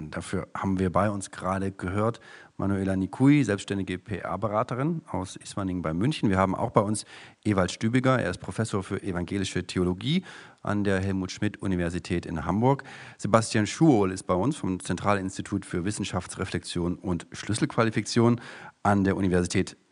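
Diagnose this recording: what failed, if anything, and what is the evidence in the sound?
Nothing failed in this recording.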